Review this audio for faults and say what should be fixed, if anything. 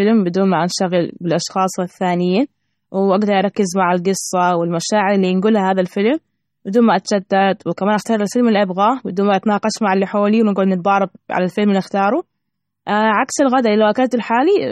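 Throughout the speech, from start to finish, the sound has a watery, swirling quality, and nothing is present above 14.9 kHz. This is likely MP3 compression at a starved bitrate that fits roughly 32 kbps. The encoder runs out of bits, cuts the treble at a fixed point, and drops weak frequency lines that flicker on and off between frames. A plain low-pass filter would dull the top without that swirl. Export at a higher bitrate or in a lossless format.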